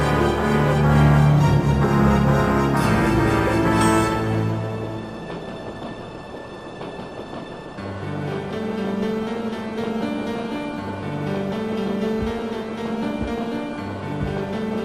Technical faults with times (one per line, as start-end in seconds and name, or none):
0.00-14.84 MP2 compression